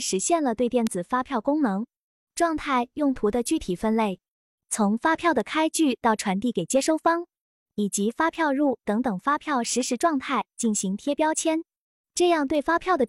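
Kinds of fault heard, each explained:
Bit error spike: a flipped bit in a stored or transmitted sample throws its value off by a power of two for one to a few samples, and then it snaps back. Each is heard as a single sharp tick unrelated to the sound, at 0.87, 5.40, 8.35, 9.65 and 12.55 s, peaking from about -28 to -10 dBFS, loudest at 0.87 s. A waveform shows a lone needle-thin spike; a spectrogram shows a hairline vertical stripe across all frequencies.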